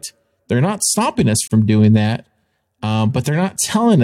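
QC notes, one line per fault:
1.48–1.51 s, gap at a join of encoded pieces: right after "not stopping us" the speech drops out into a short hole of silence, about 36 ms, with edges smeared by the codec, and then picks up at "doing that" exactly where it left off, with nothing missing. The audio was encoded as separate pieces and joined untrimmed, so the encoder's start-up delay and final-frame padding remain as dead air at the seam.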